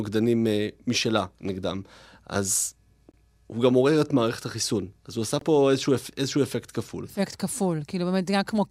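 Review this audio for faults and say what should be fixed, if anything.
Bluetooth dropout, at 3.12 to 3.14 s and again at 5.39 to 5.42 s: the speech cuts to silence for about 21 ms each time, then resumes further along as though it had kept playing underneath. The likely cause is audio packets arriving at the headphones too late and being discarded; a gap this short fits a single lost packet. To prevent it, keep the headphones close to the source with a clear line of sight and away from Wi-Fi congestion, or record and monitor over a wired connection.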